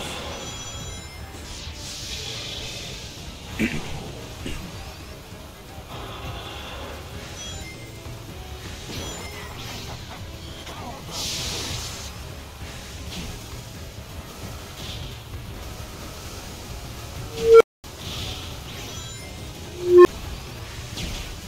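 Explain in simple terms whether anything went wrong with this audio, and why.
An unstable filter fault happens twice. At 17.26 s a tone of around 500 Hz swells over about 0.35 s until it distorts, then drops to silence for about 0.23 s. At 19.68 s a lower tone of around 400 Hz builds for 0.37 s and cuts off with only a brief gap. A filter was fed bad settings, so its output kept growing until it overflowed and reset.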